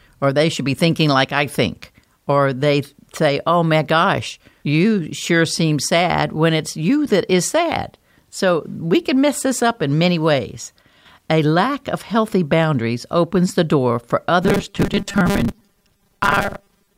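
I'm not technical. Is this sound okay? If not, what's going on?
No, there are two problems. From 10.82 to 11.06 s the speech suddenly gets noticeably quieter for a quarter of a second, then recovers. That's most likely one channel dropping out: one of the two stereo sides briefly went missing, so only half the sound came through.

From 14.43 s to the end, the speech turns into a flat, metallic buzz that still loosely follows the talking. That's robotic sound from repeated short buffers, likely caused by the audio not arriving fast enough, so tiny 5 ms snippets get replayed to fill the gaps. Roughly half of what you hear there is repeats.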